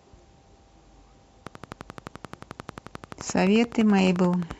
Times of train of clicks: 1.47-4.52

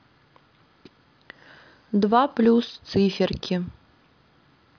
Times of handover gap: none

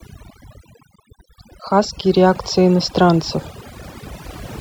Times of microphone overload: none

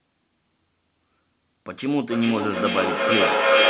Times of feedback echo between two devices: 2.02-3.70

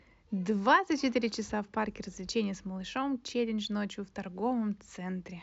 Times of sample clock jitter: 2.85-5.10

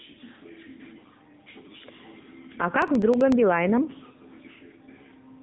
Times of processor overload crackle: 2.82-3.32

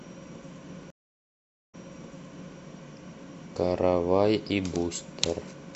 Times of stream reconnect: 0.90-2.59

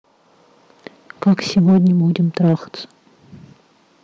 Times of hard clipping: 1.23-2.53

